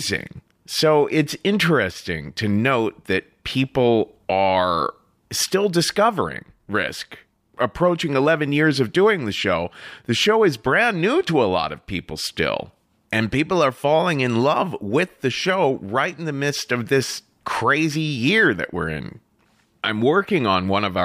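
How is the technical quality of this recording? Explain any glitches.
No glitches turn up anywhere in this recording, so there's nothing here to explain.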